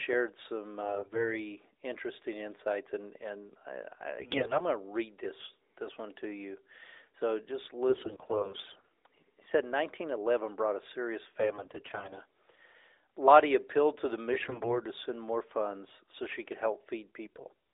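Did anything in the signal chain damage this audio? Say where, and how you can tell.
Yes: AMR bit errors on the radio link at 0.82–1.35, 4.20–4.66, 7.90–8.89, 11.40–12.21, 14.32–14.81 and 17.26–17.54 s. Corrupted codec bits keep pitch and level but make the speech hoarse and gargly, whereas packet loss would mute or repeat.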